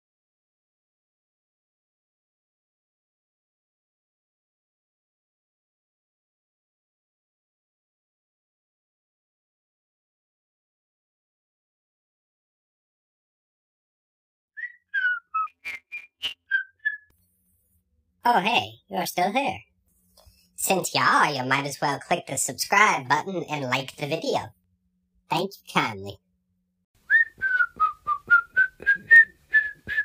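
From 15.47 to 16.47 s, planar audio read as interleaved scrambles each short block. The sound becomes a robotic buzz at 172 Hz without an octave shift, consistent with 256-sample blocks.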